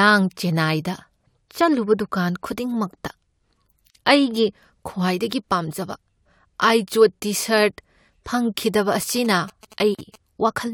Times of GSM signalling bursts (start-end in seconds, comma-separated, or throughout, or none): 9.01-10.16